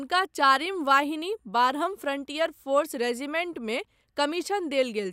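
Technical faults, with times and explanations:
No technical faults can be heard in this recording.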